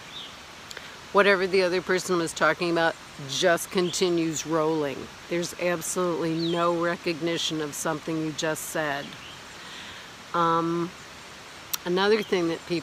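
No technical faults are audible.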